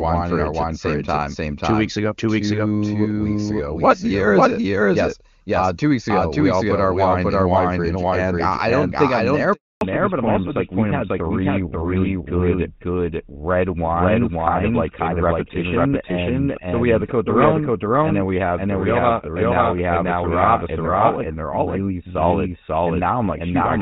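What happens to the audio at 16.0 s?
At 16.0 s you're inside a fallback to narrowband that begins at 9.81 s and runs to the end. The call drops from HD Voice to an older narrowband codec, so nothing above 4 kHz survives, and the speech sounds duller and rougher than before.

On top of that there's a doubled audio track throughout: a second, full-band copy trails about half a second behind at roughly the same level, with no room colour. It's likely caused by a slower second capture path picking up the same audio.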